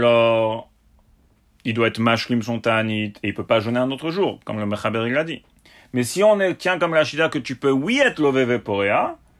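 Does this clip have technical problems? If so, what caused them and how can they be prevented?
No, there are no technical problems in this speech clip. With no faults present, there is nothing here to trace to a cause or to prevent.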